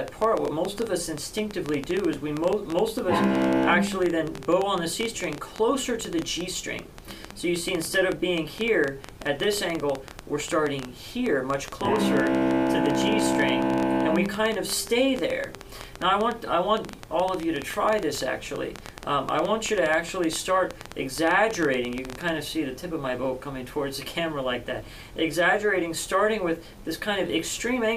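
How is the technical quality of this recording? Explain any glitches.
Quality is let down by one clear problem. From 0.08 to 22.3 s there's a train of clicks, roughly ten a second at an uneven pace, poking well above the sound, likely interference or a faulty connection.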